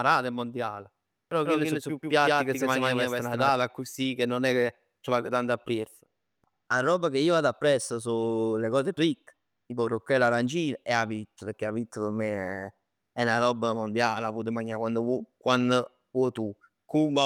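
A doubled audio track runs from 1.46 to 3.50 s in this speech clip: an equally loud, dry copy trails roughly 150 ms behind, starting and stopping abruptly, likely from a second, slower capture path.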